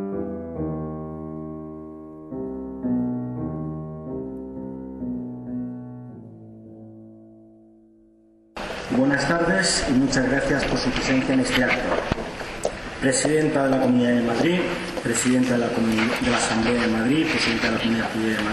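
Hard clipping at 8.99 to 10.63 s, 11.56 to 12.12 s and 13.06 to 13.85 s: the signal overran a stage's limit by about 5 to 6 dB, so peaks were sliced flat, and the added high harmonics are heard as crackle on the peaks.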